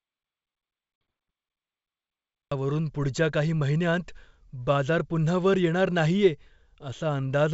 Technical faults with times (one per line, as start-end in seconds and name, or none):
0.00-2.51 audio dropout to silence
0.96-1.01 packet loss on an ADPCM call